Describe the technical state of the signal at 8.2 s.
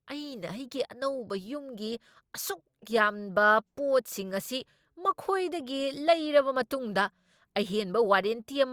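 At 8.2 s the speech signal is intact, with no audible dropout, distortion, clipping or other technical fault at that moment.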